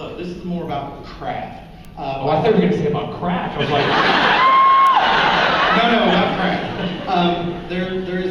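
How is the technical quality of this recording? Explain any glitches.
Two isolated glitches affect the recording. Bit error spikes occur at 1.85 s and 4.87 s. In each, a single flipped bit makes one sample jump by a power of two and snap back, giving a sharp broadband tick unrelated to the sound. The second, at about -5 dBFS, is louder than the first, at about -17 dBFS.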